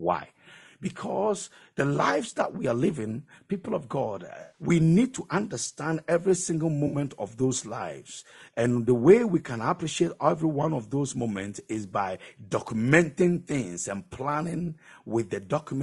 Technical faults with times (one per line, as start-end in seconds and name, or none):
0.00-15.82 low-delay AAC compression
4.41-4.62 AAC frame loss with concealment
6.87-6.97 AAC frame loss with concealment